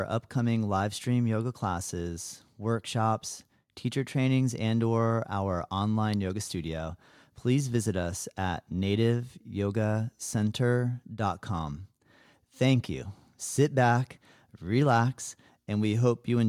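No technical faults can be heard anywhere in this speech recording; the signal stays continuous and steady throughout.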